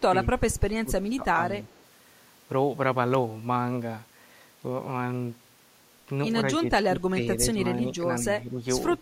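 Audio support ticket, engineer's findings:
Speech suppressed in double talk at 0.11–0.29 s, 0.83–1.63 s, 6.59–7.29 s, 7.74–8.03 s and 8.42–8.57 s. Near-end speech dips, deepest around 20 dB at 6.59–7.29 s, around 15 dB at 0.83–1.63 s, milder elsewhere. Likely echo canceller during simultaneous talk, unable to separate local talker from loudspeaker echo, attenuating both.

Echo leak at 1.70–1.85 s. Faint delayed copy of the speech, 141 ms behind, about 35 dB below the direct signal. Likely residual from a speakerphone whose echo canceller left part of the mic pickup unremoved, returned down the line.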